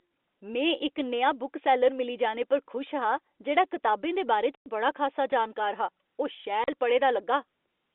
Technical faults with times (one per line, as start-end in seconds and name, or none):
4.55-4.66 packet loss filled with silence
6.64-6.68 packet loss filled with silence